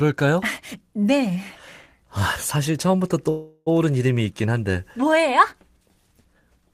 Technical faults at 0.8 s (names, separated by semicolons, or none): none